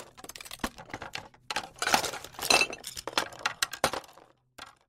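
A brief glitch at 0.78 s and another from 2.88 to 2.90 s break the flow of the sound. These are damaged data in a compressed stream: corrupted bytes make the decoder misread frames there, lose sync and hunt for the next valid frame header before resuming.

From 3.22 to 4.82 s, a fine ticking rides on the sound as its level falls by roughly 20 dB. This is zipper noise: the level change is applied in unsmoothed steps, around 200 per second, and each step adds a small click.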